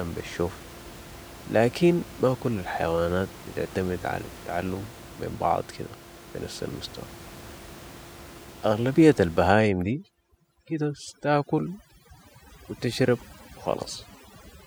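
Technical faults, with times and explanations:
9.48–14.66 s, overdone noise removal: the room noise, about 19 dB below the speech, is gated away too aggressively, leaving near silence with twinkling specks and taking quieter parts of the speech with it. On a spectrogram, scattered isolated bins flicker in blank background.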